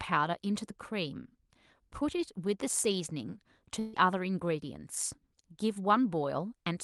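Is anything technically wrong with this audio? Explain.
Yes, there is one fault. A burst of packet loss runs from 3.79 to 3.95 s. Roughly 140 ms of consecutive audio data never arrived in time, so the receiver filled the hole by extending the last sound it had and fading it down, with no drop to silence. What you hear is a brief continuation of the last sound that fades down, and the speech then resumes about 140 ms further on, with that stretch missing. The clip also carries the coding texture and the 12 kHz upper limit of a call codec.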